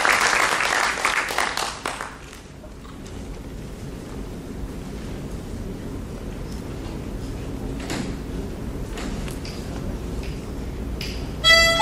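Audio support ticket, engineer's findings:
Jitter buffer speed-up, 9.24 s to 10.88 s. Sound runs about 4% fast (104% speed), pitch unchanged; timing compressed. Probable component: receiver jitter buffer. Mechanism: buffer overfilled, as when delayed packets arrive together, so playout trimmed repeated pitch-period-length slices to drain the excess. Around 70 ms removed in total across the stretch. Check network delay spikes and buffer target settings.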